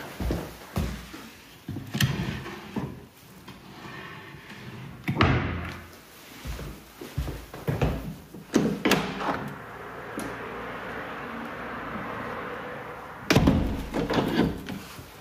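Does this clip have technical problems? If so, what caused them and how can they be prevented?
Yes. Gain pumping runs through the whole clip: the gain ducks by about 5 dB under each loud sound, leaving levels squashed together. The likely cause is input gain set far too high, with a fast limiter or compressor clamping down on every peak. Prevent it by lowering the input gain so peaks sit well below the limiter threshold.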